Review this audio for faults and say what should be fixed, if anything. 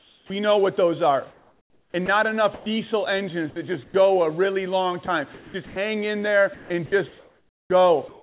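Comfort noise in place of the background, 0 to 0.3 s, before "know what those are": the real background is replaced by a steady, featureless hiss about 9 dB quieter, likely filled in by the receiver while the sender paused transmission.

Onset clipped by the voice detector, 0.25 to 0.3 s: "know what those are" starts abruptly, its first 50 ms missing, likely because the detector noticed speech late and comfort noise covered the gap.

Sound chopped by the voice detector, at 1.3 to 2.66 s, 3.5 to 3.94 s, 5.06 to 5.76 s, and 6.54 s to the end after "in there": quiet syllables and word edges drop out. About 780, 160, 320 and 990 ms are lost, most likely because the detector kept toggling transmission on and off. All of this sits within the call path's band, which stops at 4 kHz.

Disabling discontinuous transmission at the sender, or giving its voice detector a longer hangover and a more sensitive onset threshold, would prevent these dropouts.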